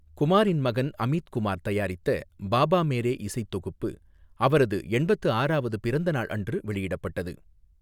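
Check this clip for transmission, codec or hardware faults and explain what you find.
Nothing wrong turns up here: the speech comes across steady and intact, with no sign of trouble from the transmission path, the encoding or the hardware.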